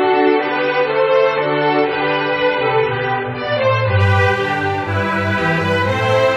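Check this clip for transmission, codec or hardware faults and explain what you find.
One fault is present: an adaptive stream starting at a low bitrate. From 0.0 to 4.0 s the audio has nothing above 5.9 kHz, and coding artefacts sound smeared and watery, which fits a low-rate MP3 stream of around 22 kbit/s. The player began on this cheap version to start quickly, then switched once it had measured the connection, here to what sounds like 128 kbit/s. The change is abrupt with no gap. On a spectrogram, energy stops flat at 5.9 kHz and then fills upward at 4.0 s.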